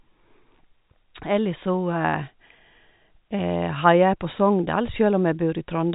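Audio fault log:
No faults are present: the speech is carried in a telephone-band channel consistent with G.711 A-law coding at 64 kbps, with nothing passing above 3.8 kHz and any quantisation noise faint at most.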